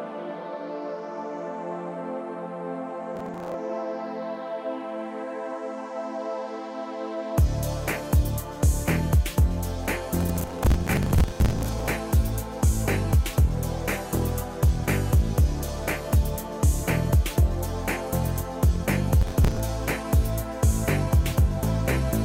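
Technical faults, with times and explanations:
3.16–3.54 s, 10.21–11.88 s and 19.22–19.60 s: processor overload crackle. Each burst is a gritty, tearing crackle riding on the sound. The middle one lasts about 1.7 s, the other two about 0.38 s each. The processor kept missing its deadlines for short audio buffers, which fits buffers of around 10 ms. Each miss replayed a scrap of old audio with hard edges. That is roughly 15 misses in the short bursts and dozens in the long one. The crackle stops once the load passes.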